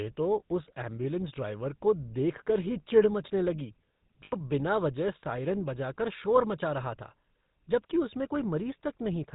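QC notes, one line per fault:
throughout: GSM full-rate codec. The speech is buzzy and gravelly, with nothing above 4 kHz, consistent with the 13 kbps full-rate coder's pulse-driven vocal-tract model.
4.24–4.35 s: lost GSM frames. For about 80 ms the sound holds as a rough, metallic ring, as the last good frame repeats.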